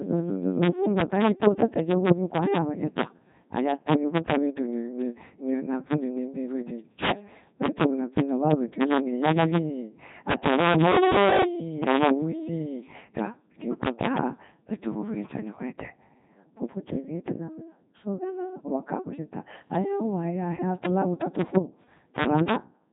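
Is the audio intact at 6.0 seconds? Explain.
No. At 6.0 s, loud peaks snap into violent cracks, harsher than clipping. This is integer overflow: the level runs about 11 dB too hot, so a small share of samples wrap to the opposite sign. The speech is also robotic and buzzy, with nothing above 3.8 kHz. The Codec 2 vocoder, at a rate that fits its 2.4 kbit/s mode, rebuilds the voice from pitch and envelope parameters with sine waves, so the original waveform is lost. Both faults run through the whole clip.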